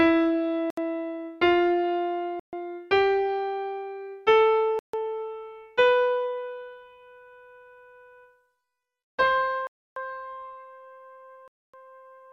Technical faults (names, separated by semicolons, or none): Bluetooth stall